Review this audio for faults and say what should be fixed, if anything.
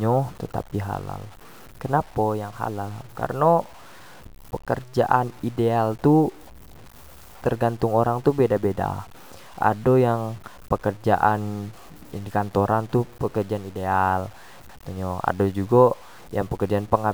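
Low bit depth without dither runs through the whole speech clip: grainy, gritty distortion rides on every phrase, and the quietest tails sputter between two levels or drop to silence. The likely cause is truncation to 8 bits with no dither, so the rounding error tracks the signal at roughly 30 dB below the speech. A zoomed waveform shows visible staircase steps, and a spectrogram shows signal-dependent broadband grit that vanishes in the gaps. Keep the audio at 16 or 24 bits, and add dither whenever reducing bit depth.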